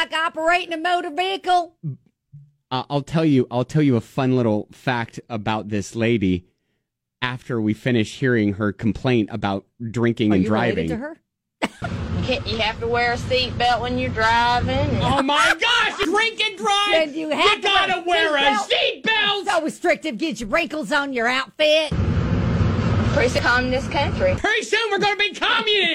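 At 16.05 s and 23.38 s, damaged data in the compressed stream makes the decoder lose frame sync, giving a brief glitch.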